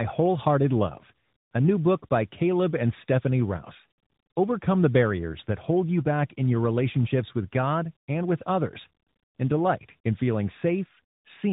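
Tandem speech coding runs through the whole clip. The audio appears to have been decoded and re-encoded at each link boundary, with three separate speech coders in sequence, each working on the previous one's degraded output. The roughness and warble fit a chain alternating CVSD and G.711 A-law, ending in AMR-NB at 12.2 kbit/s. Nothing is left above 3.8 kHz, so the speech sounds muffled and narrow, with a grainy, watery texture that builds with each coding stage.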